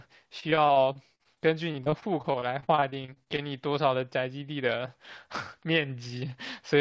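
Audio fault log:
0.40–3.40 s, repeated packet loss (robotic sound): The speech turns choppy, with more than two dozen brief dropouts, the longest about 44 ms, adding up to roughly 0.58 s of missing audio. Each hole is bridged by stretching the preceding sound forward, so about a fifth of this stretch is synthetic fill, which produces the buzzy, robotic texture. The top band stops at 8 kHz, which fits a wideband call codec such as G.722.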